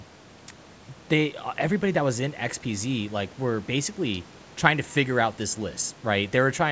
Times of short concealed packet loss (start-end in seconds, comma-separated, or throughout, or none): none